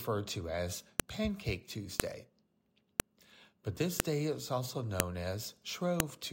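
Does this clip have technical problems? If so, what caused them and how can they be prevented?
Yes. A file header played as audio gives a sharp snap at 1.00 s (after "to as"), 2.00, 3.00, 4.00 (before "day is also"), 5.00 (after "this day is also") and 6.00 s. Each one-second piece kept its WAV header, and those bytes play as samples. The strict one-second grid, unaffected by loudness, separates it from clipping or dropouts. Strip headers before concatenating or streaming chunks.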